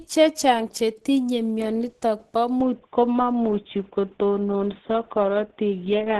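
Throughout, the speech sounds grainy and hoarse, with nothing above about 12.3 kHz, likely from heavy Opus compression in hybrid mode, fitting a rate near 12 kbps. From 2.61 s to the end the speech abruptly turns dull and boxy, loses everything above 3.6 kHz, and shifts a few decibels in level with a faint new noise floor, consistent with the input switched to a poorer device.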